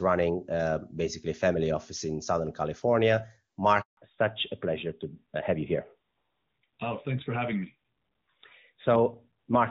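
At 3.81 s the speech fades out within a few tens of milliseconds and stays silent for 160 ms, returning at 3.97 s. This handover gap means the phone was switching the call between networks, and no speech frames got through until the new link was up.

From 3.97 s to the end, the speech turns dull and rougher, with nothing above 4 kHz. This is a fallback to narrowband. Before the switch, the speech is crisp, as expected from AMR wideband (HD Voice) at a high rate such as 23.85 kbit/s. Afterwards the call runs on an older narrowband codec, consistent with AMR-NB at 12.2 kbit/s.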